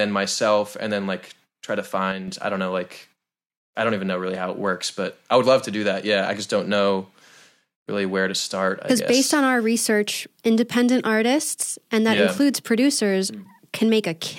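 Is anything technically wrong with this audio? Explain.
Yes, there is one fault. From 2.12 to 2.28 s, right after "then like try to" and before "I don't know like", the speech abruptly drops by about 6 dB for roughly 0.16 s, then returns to its previous level. This is likely one channel dropping out. If the left and right channels carried the same signal, losing one halves the mono sum without changing its tone. On a waveform the envelope shows a sudden, flat-sided step down and back up. On a spectrogram the same band darkens evenly across all frequencies.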